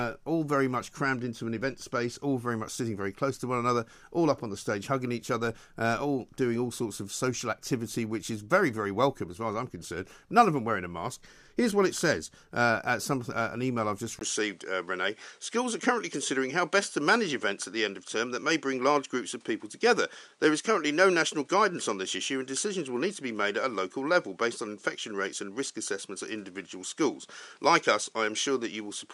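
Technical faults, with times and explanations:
14.19 s to end, input switched to a poorer device: after "an email I've just", a 20 ms gap, then nothing above 11.1 kHz and a new noise floor roughly 40 dB down, level unchanged; likely a device change.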